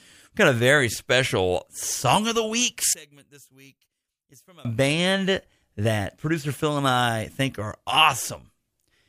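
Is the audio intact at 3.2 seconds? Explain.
No. At 3.2 seconds the speech has nearly vanished, dropping by about 26 dB into a faint remnant from 2.93 to 4.65 s, and it returns just before "band that producer". The likely cause is one channel inverted: with one stereo side in reversed polarity, everything common to both channels cancels when they are summed to mono. The centred voice and background disappear, leaving only the small difference between the channels.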